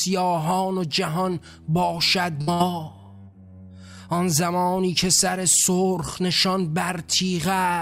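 Bursts of packet loss at 2.41 to 2.50 s and 2.53 to 2.63 s: each time, lost packets left a gap that was filled by extending and fading the preceding sound for about 60 ms before playback resumed, skipping roughly 60 ms of audio.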